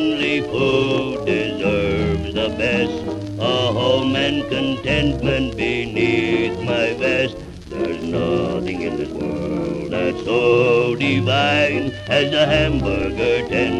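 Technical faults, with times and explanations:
3.04 s, 8.03 s and 13.03 s, audio missing between chunks: three tiny skips about 5 s apart, each losing something like 7 ms with the two sides butted together. The steady spacing points to a recorder likely dropping a sliver at each 5 s chunk boundary.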